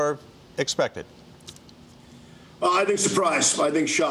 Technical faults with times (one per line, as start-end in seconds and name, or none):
none